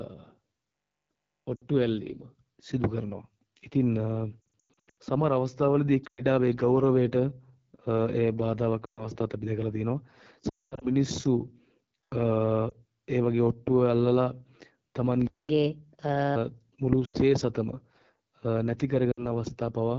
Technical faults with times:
0.00-19.98 AMR wideband (HD Voice) codec
1.56-1.64 lost AMR speech frames
4.42-4.96 lost AMR speech frames
6.07-6.25 lost AMR speech frames
8.85-9.06 lost AMR speech frames
10.49-10.87 lost AMR speech frames
12.69-12.73 lost AMR speech frames
15.27-15.49 playback stall
15.49-16.36 catch-up at higher speed
17.05-17.16 lost AMR speech frames
19.11-19.26 lost AMR speech frames

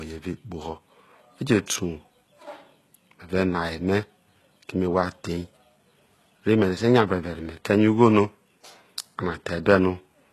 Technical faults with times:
0.00-10.33 HE-AAC compression

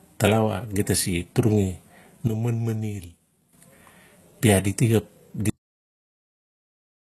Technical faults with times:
0.00-7.09 HE-AAC compression
2.28-3.53 sudden gain jump
5.50-7.09 cut-off end

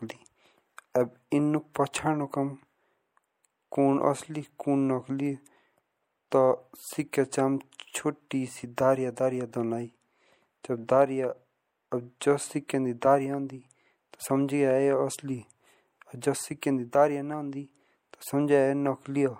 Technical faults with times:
0.00-19.39 MP3 compression
16.61 pre-echo

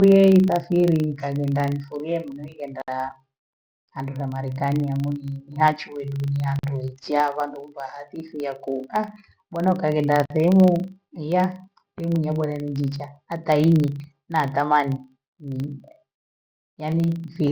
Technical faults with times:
0.00-17.52 filter restarted on every block
6.59-6.63 gap at a join of encoded pieces
10.25-10.30 gap at a join of encoded pieces

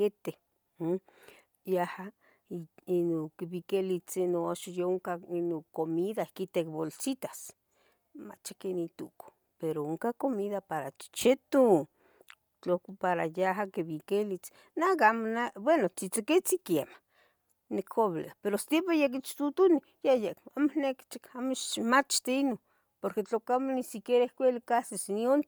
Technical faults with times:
0.00-25.47 Bluetooth LC3 compression

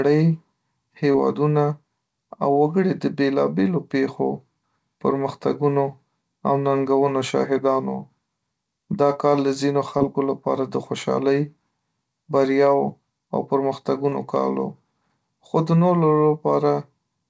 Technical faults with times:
1.12-1.16 short concealed packet loss
9.98-10.02 short concealed packet loss
14.10-14.14 short concealed packet loss

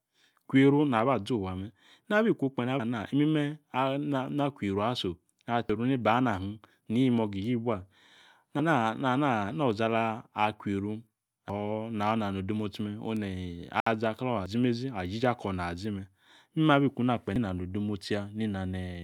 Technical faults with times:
2.80 audio missing between chunks
5.70 audio missing between chunks
8.60 audio missing between chunks
11.50 audio missing between chunks
13.80-13.87 Bluetooth stall
14.46 audio missing between chunks
17.36 audio missing between chunks

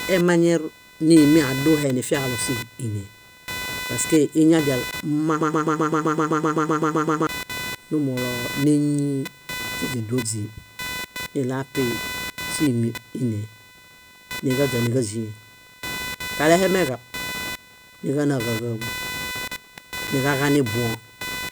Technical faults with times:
0.00-21.51 computer activity noise
5.41-7.27 broken-record loop

